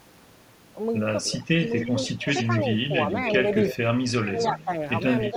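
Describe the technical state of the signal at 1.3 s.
At 1.3 s the signal is inside an echo leak that runs from 1.24 to 2.63 s. A delayed copy of the speech trails the original by 303 ms, sitting roughly 15 dB below it. This is most likely a far end playing the call through a loudspeaker, where the echo canceller failed to remove what its microphone picked up and sent that residue back, so the speech returns as a faint, late double.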